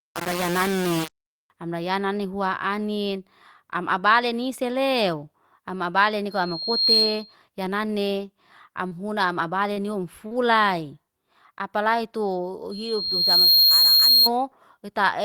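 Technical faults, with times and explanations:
0.0–1.5 s: low bit depth without dither. The opening speech sounds coarse and grainy, with distortion that tracks the voice and quiet moments that sputter. The likely cause is rounding to very few levels, about 4 bits, without dither, leaving error only about 10 dB below the signal. The waveform shows visible stair-steps, and the spectrogram shows broadband hash that follows the speech.
6.3–7.35 s and 12.71–14.3 s: loudspeaker feedback squeal. A pure 4.2 kHz tone swells over roughly 0.7 s into a piercing whistle about 10 dB above the speech, as the microphone-to-speaker loop exceeds unity gain at that frequency. The spectrogram shows a single bright horizontal line, and the waveform envelope balloons.
8.87–8.93 s, 9.73–9.79 s, 10.27–10.33 s: short concealed packet loss. Each time, about 40 ms of audio is missing, and the receiver patches the gap by extending the preceding sound, causing a brief smear or wobble. 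The spectrogram shows short stretched or repeated patches where fine detail blurs.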